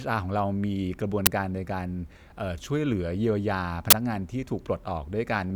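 At 1.26 s a brief, harsh burst of loud digital noise cuts across the speech, and a second burst of the same kind, roughly twice as long, runs from 3.90 to 3.93 s. Both come from an uninitialised buffer: a block reached the output before any audio had been written into it, so stale memory contents were played as samples. The first lasts about 11 ms, which fits a 512-sample buffer, and the second about 21 ms, which fits a 1024-sample one.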